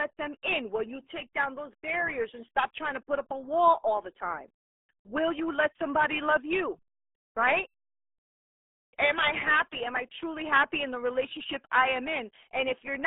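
Throughout, the RealAudio 14.4 codec muffles and garbles the speech, fitting an 8 kbit/s coder; the spectrogram shows a 250 Hz to 3.5 kHz band, empty above 3.7 kHz.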